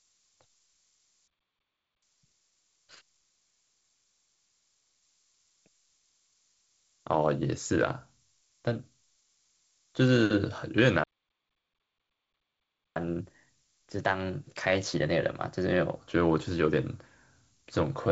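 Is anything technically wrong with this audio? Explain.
Yes. Throughout the speech there is low bit depth with noise shaping: a steady, thin hiss, roughly 25 dB below the signal, climbing toward the top of the band. It fits about 9-bit quantisation with the rounding error pushed upward in frequency.

Playback stalls occur from 1.28 to 2.03 s (0.75 s) and from 11.04 to 12.96 s (1.92 s). The sound cuts out mid-flow and then resumes, most likely because the player ran short of data or its thread was blocked.

Catch-up at higher speed follows each stall. From 2.03 to 5.03 s playback runs at 1.15x, raising pitch roughly two semitones. From 12.96 to 15.96 s it runs at 1.1x, about a semitone and a half higher.

The band limit near 7.7 kHz and the light upper-band hiss point to G.722 wideband telephone coding, likely in its 48 kbit/s mode.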